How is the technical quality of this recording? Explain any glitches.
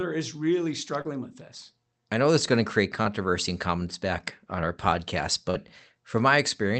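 Three brief glitches interrupt the speech, each a short concealed packet loss over a call path whose audio tops out around 8 kHz. At 1.01 to 1.07 s, 3.03 to 3.06 s and 5.50 to 5.57 s, the sound briefly smears or wobbles. Roughly 40, 20 and 40 ms of audio arrived too late, so the receiver extended the preceding sound to bridge each gap.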